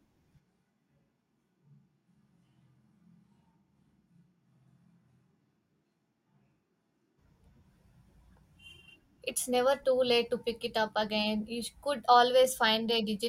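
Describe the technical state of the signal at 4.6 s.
At 4.6 s the speech sits within a switch to a distant microphone, 0.41 to 7.17 s: hollow, roomy, thin, about 10 dB quieter, likely the close microphone dropping out.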